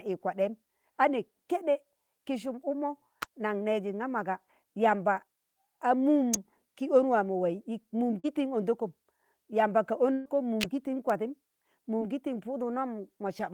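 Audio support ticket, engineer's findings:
Electrical switching spike at 3.22 s, 6.34 s and 10.61–10.63 s. Sharp snaps laid over the speech, which runs on intact underneath. Likely a nearby switch or motor arcing into the line. No smearing or lost audio, unlike packet loss.

Short concealed packet loss at 8.19–8.26 s and 11.99–12.03 s. Brief smear where about 40 ms, then about 20 ms, never reached the decoder and was filled by extending the last sound. A continuation, not an added click, and far shorter than a burst.

Burst of packet loss at 10.14–10.27 s. About 120 ms missing. The receiver stretched the last sound into a fading held buzz or hiss with no silent gap, then jumped ahead. The length and the skipped speech set it apart from the short concealments.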